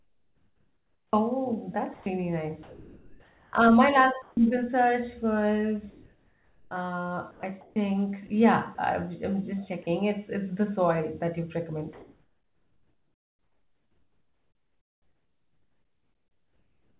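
From 0.0 to 1.13 s the opening background is comfort noise in place of the background, likely because discontinuous transmission had paused the sender while no speech was detected, leaving the receiver to synthesise a fill. The real room tone, which sits about 43 dB below the loudest speech, is swapped for a steady, featureless hiss about 5 dB higher. It differs from a dropout because no speech goes missing. Only the background's texture is lost.

Between 1.94 and 4.37 s, and again from 5.9 to 7.76 s, the speech is chopped by the voice detector. The detector likely flipped between sending and muting several times in each stretch, so about 1.2 s and 1.1 s respectively of quiet syllables and word edges became comfort noise. The speech sounds choppy. It is this repeated switching that sets it apart from a single drop.

At 8.75 to 8.78 s, and at 9.83 to 9.86 s just after "I'm just", the sound is dropped by the voice detector. 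Each time a brief piece of quiet speech, about 20 ms, was likely judged to be background, and a 30 ms patch of steady noise replaced it before sending resumed. Each drop is one short, isolated gap, unlike the extended chopping earlier.

After "the soil that you", from 11.93 s to the end, comfort noise again replaces the background, likely for the same discontinuous-transmission reason, this time about 2 dB quieter than the real room tone and just as flat. Throughout, the call path's band limit shows as nothing above 4 kHz, which fits a narrowband G.711-style codec.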